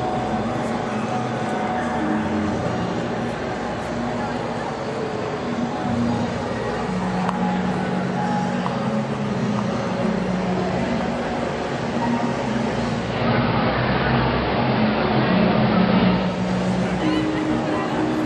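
Channel delay (comb filtering), 1.69 to 3.16 s: one channel lags by roughly one sample, and summing cancels treble near 20 kHz, dulling the top.

Digital radio blending to analogue, 12.89 to 16.51 s: a 433 ms cross-fade to AM shifts level about 4 dB and brings hiss roughly 20 dB down.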